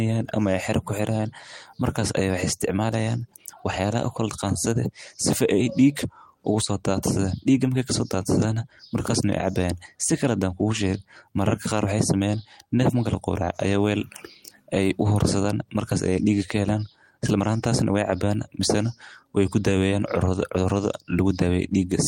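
No technical faults occur at any point in the clip, so there is nothing to place in time order.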